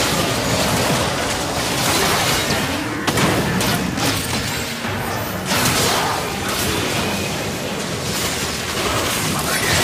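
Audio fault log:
No faults detected in this audio.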